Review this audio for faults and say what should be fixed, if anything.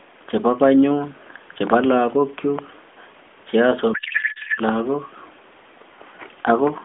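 From 3.94 to 4.60 s the speech collapses into garbled noise and warble with a codec payload misread. The AMR frames are packed octet-aligned but decoded as bandwidth-efficient, so every field lands in the wrong place. Match the payload format on both ends.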